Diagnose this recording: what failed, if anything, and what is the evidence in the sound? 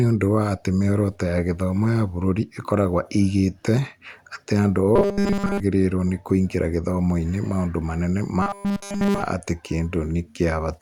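The speech goes into robotic sound from repeated short buffers twice: from 4.96 to 5.60 s, between "atĩ andũ" and "nĩ kũingĩra", and from 8.42 to 9.23 s, right after "maũndũ manene ma". Both stretches become a rigid metallic buzz at 200 Hz, with essentially all of the audio replaced by repeats. That points to the driver or buffer stage. The likely cause is fresh audio arriving late and a 5 ms chunk getting looped to fill the gap.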